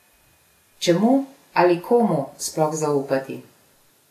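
Vorbis compression runs through the whole clip: the speech sounds hissy and grainy, with a dulled top end and smeared consonant attacks. The likely cause is low-bitrate Vorbis encoding, around 34 kbps by the sound, which trims the treble and swaps fine high-frequency detail for coarse noise.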